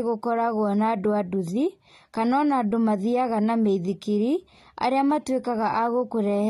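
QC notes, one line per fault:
Throughout, AAC compression: the speech sounds dull and smeared, with a fizzy, warbling edge on sibilants and held sounds and nothing above 14.7 kHz. The likely cause is an AAC-LC encode near 32 kbps, whose coarse quantisation leaves spectral holes and lowers the cut-off.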